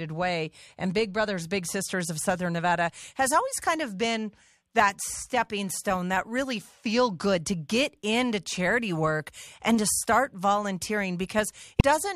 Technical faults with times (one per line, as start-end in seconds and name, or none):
11.80 damaged data in a compressed stream